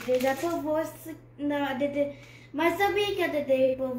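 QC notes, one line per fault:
0.35–0.42 s, AAC frame loss with concealment: a roughly 43 ms smeared, phasey patch, which fits a single lost frame that the decoder filled by reusing the last good spectrum with scrambled phase.
3.64–3.75 s, AAC frame loss with concealment: about 85 ms, which suggests two frames gone. The repeated spectrum runs longer here.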